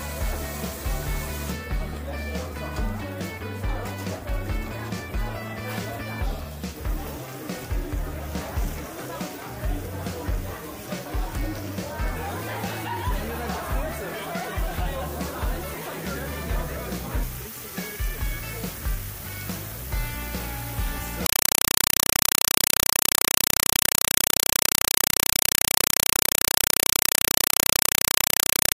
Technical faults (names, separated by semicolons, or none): compressed stream played as audio